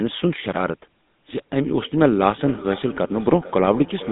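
From the start, the speech carries the rasping roughness of the GSM full-rate codec. This early mobile codec models the vocal tract and excites it with a sparse train of regular pulses, keeping only every third excitation sample. The result is a buzzy, gravelly grain over every syllable, and the damage is plainly audible. The sound sits in a narrow phone band of roughly 150 Hz to 3.7 kHz, with nothing above 3.8 kHz, consistent with a 13 kbps full-rate stream.

At 1.28 s a feedback echo between two devices begins and runs to the end. Two devices in the same room share the call. One device plays what the other's microphone sent, and that microphone picks it up again. Neither echo canceller can remove the other device's playback. Each stretch of speech returns about half a second later, thinner and more ringing. The repeats peak at about 16 dB below the speech and overlap what follows.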